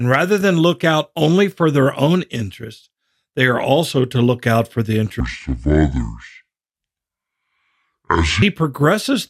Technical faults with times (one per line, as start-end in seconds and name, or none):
5.20-8.42 section at the wrong speed